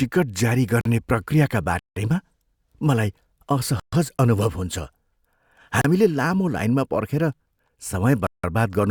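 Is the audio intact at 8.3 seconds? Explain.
No. At 8.3 seconds the speech falls into a block of digital silence running from 8.27 to 8.44 s, about 170 ms, a length that fits an 8192-sample buffer. The samples in that span were replaced by zeros, so the sound cuts out and returns with no fade, leaving a short hole. A waveform shows a nearly flat line there; a spectrogram shows an empty vertical band.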